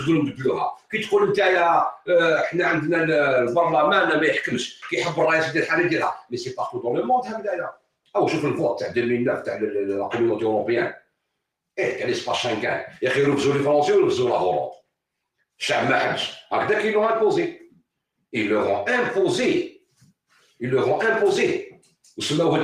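Throughout, the level pumps and thins by a few decibels as sustained tones and tails sink, a sign that a speech-tuned noise suppressor was applied to music or sounds. Sharper dips follow where the sound was cut by the noise suppressor, held or fading material dropping while attacks survive: 0.32–0.93 s (about 21 dB), 1.92–2.09 s (about 19 dB), 4.73–4.91 s (about 13 dB), 6.13–8.15 s (about 22 dB), 10.94–11.78 s (about 21 dB), 14.73–15.6 s (about 21 dB), 19.78–20.61 s (about 19 dB) and 21.77–22.1 s (about 12 dB).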